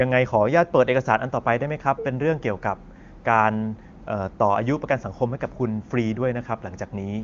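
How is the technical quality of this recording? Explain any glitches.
The technical quality of this recording is good, and there are no glitches to explain.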